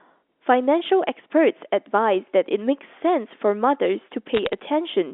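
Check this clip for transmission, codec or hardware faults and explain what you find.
There is one transmission fault, on a narrowband line whose sound fits G.711 mu-law telephone coding, with speech confined to about 300 Hz to 3.6 kHz.

From 4.35 to 4.53 s, bit errors on a digital phone line add crackle to the speech. Flipped bits, at a rate of roughly one in five hundred, corrupt single 8-bit samples, and sign or high-order hits make sharp ticks. On the waveform they appear as isolated one-sample spikes. On the spectrogram they show as thin vertical lines spanning the band.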